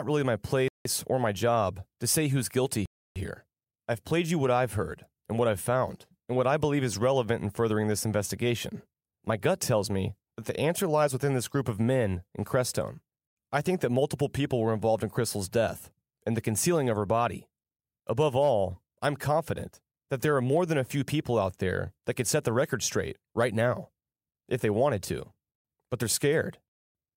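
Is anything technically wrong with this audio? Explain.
Yes. Two blocks of digital silence cut the speech, at 0.68 to 0.85 s after "really my" (171 ms, which fits an 8192-sample buffer at 48 kHz) and at 2.86 to 3.16 s after "to say who's guilty" (about 300 ms). Each likely happens when the output buffer isn't filled in time and zeros go out instead. Unlike a quiet pause or a network dropout, the background vanishes completely and cuts back abruptly.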